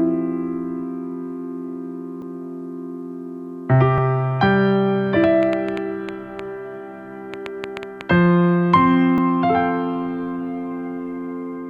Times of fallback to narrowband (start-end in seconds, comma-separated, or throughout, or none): none